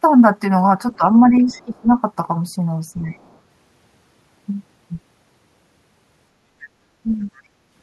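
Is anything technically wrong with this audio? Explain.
Yes. Speech suppressed in double talk: with both sides talking, the echo canceller likely could not separate the local talker from loudspeaker echo and turned everything down. The speech dips by about 10 dB at 0.98–1.03 s and 2.97–3.14 s, and by about 20 dB across 1.31–1.89 s.

Other side's voice leaking through: the echo canceller likely left residual loudspeaker sound in the microphone signal. A faint second voice, roughly 30 to 35 dB below the speech, surfaces at 1.52–1.81 s, 3.13–3.37 s and 7.2–7.41 s.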